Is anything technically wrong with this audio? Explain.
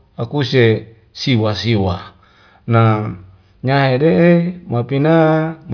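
No, nothing in this speech recording points to a technical fault.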